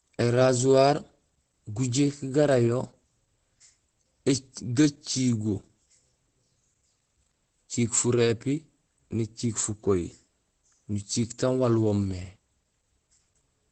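Opus voice compression runs through the whole clip. The codec is working in its SILK linear-prediction mode at wideband, so the top of the spectrum is cut away and nothing remains above about 8.7 kHz. The speech sounds dull and muffled as a result. The excitation is coded coarsely, adding a hoarse, faintly robotic edge. The damage is plainly audible, which fits a low bitrate of around 12 kbps with 20 ms frames.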